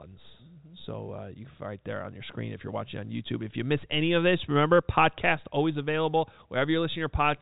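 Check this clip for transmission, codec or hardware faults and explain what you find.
Nothing stood out on listening to this speech, which carries the narrow band of ordinary G.711 telephone coding, with nothing above about 3.8 kHz.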